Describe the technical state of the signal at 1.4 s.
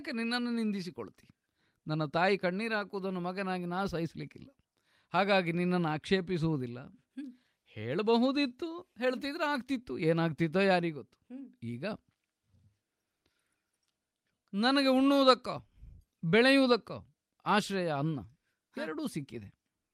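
At 1.4 s the speech signal is intact, with no audible fault at that moment.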